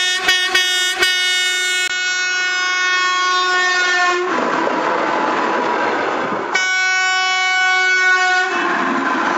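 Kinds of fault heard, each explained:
Input switched to a poorer device: the recording likely changed over to a lower-grade input at 1.88 s. After a 20 ms gap, the sound runs to the end with nothing above 7.6 kHz, about 5 dB quieter, over new background noise roughly 30 dB down.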